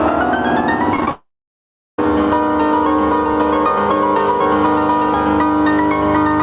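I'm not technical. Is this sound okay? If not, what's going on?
No. Throughout the clip the loudness keeps rising and dipping with each loud sound, and the whole thing feels squeezed. That is gain pumping. The recording level was likely set too high, so an automatic control keeps pulling the volume down whenever something loud comes through.

From 0.96 to 1.11 s the audio turns choppy and robotic, with four tiny holes in quick succession. This is repeated packet loss. Small chunks of the audio never arrived over the connection, and each hole was patched by stretching the sound just before it.

From 1.11 to 1.99 s the audio breaks off. After a brief trailing-off sound, most of that gap is silence, and then the audio resumes without the missing part. This is a long network dropout, most likely a stall in the connection. The call connection itself also makes the audio sound telephone-like, because nothing above 4 kHz gets through.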